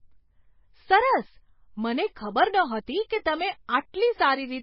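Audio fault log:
throughout: MP3 compression. The speech sounds watery and swirly, with nothing above 5.5 kHz. The likely cause is a heavily starved MP3 encoder, which fits a bitrate near 18 kbps. Short of bits, it drops the treble and lets weak frequency lines flicker between frames.
3.09 s: pre-echo. A brief hiss, about 13 ms long, comes just before "કે તમે". The codec spread its noise across a whole block. The loud attack sat late in that block, so its noise leaked into the quiet moment ahead and smeared the onset.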